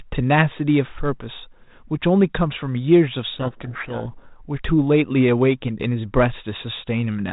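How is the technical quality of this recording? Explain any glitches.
The speech comes through a G.726 telephone path at 32 kbit/s, band-limited below 4 kHz, and has one clear glitch. From 3.34 to 4.13 s a codec payload misread reverses the bit order of each G.726 code word, so the decoder applies wrong differences and buries the speech in harsh distortion. Unlike low-bitrate hiss, it appears abruptly and clears just as suddenly.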